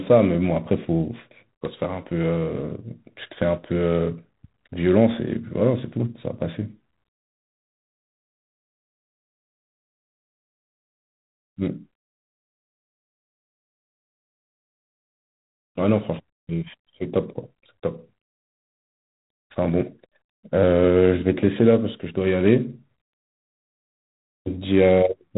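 G.726 ADPCM coding runs throughout: each sample carries only a few bits of prediction error, which fits 24 kbit/s, leaving harsh, level-following hiss and nothing above 3.8 kHz.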